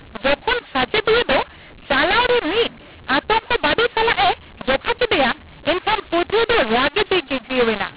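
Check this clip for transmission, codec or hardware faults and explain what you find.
There is one fault, and it runs through the whole clip. The speech is carried over G.711 telephone coding, and the absence of anything above 4 kHz fits an 8 kHz sampling rate.

mu-law and A-law mixed up, throughout: the speech was encoded with A-law but decoded as mu-law, so each 8-bit code maps to the wrong amplitude. Levels come out scrambled, making the speech harsh and gritty, and the quietest samples are pushed well above silence, so pauses fill with hiss.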